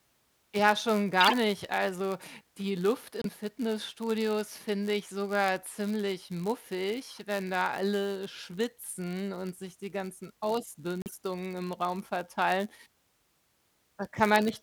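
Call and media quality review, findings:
Block size mismatch (padded), whole clip. Steady buzz near 99.6 Hz under the speech. Buffer handoff between stages. Writer blocks are shorter than reader blocks, so zeros fill each gap. Playback runs slow, speed 0.996.

Corrupt frame decoded at 1.20–1.33 s, 3.20–3.26 s and 11.02–11.15 s. Chirps and bursts of noise. Probable codec decode stage. Damaged bits misplace spectral energy. About a handful, a couple, and several frames are hit.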